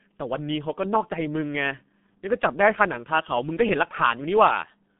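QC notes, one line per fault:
throughout: G.723.1 codec. The speech sits in a narrow band from 150 Hz to 3.6 kHz, so it sounds muffled. On top of that it has a heavy hoarse, grainy quality, and consonants smear into the vowels around them. The codec rebuilds the voice from a coarse model refreshed only every 30 ms, which fits a bitrate near 6 kbit/s. Plain telephone band-limiting would leave consonants crisp within the band, but here they blur.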